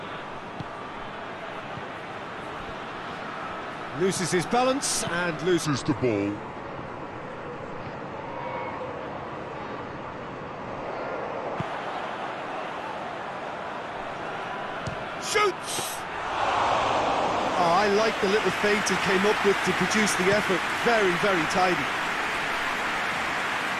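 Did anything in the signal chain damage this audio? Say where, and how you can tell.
Yes: a section at the wrong speed from 5.65 to 11.58 s plays at 0.76x, about five semitones low, likely a playback clock mismatch; spectrogram harmonics drop and stretch.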